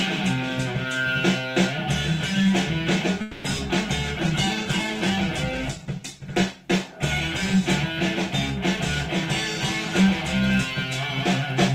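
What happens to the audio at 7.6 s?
At 7.6 s the sound is still rough, watery or muffled, near the end of a call bitrate drop from 4.16 to 7.92 s. The bandwidth estimate fell, forcing coarser coding and lost highs, consistent with about 48 kbps falling to roughly 11 kbps, held lowest for 1.92 s.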